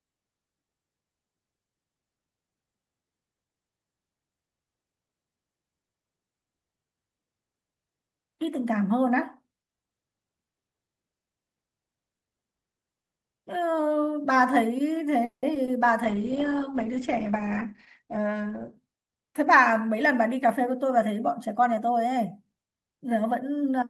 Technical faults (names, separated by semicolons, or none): call audio freeze; short concealed packet loss; call bitrate drop; jitter buffer speed-up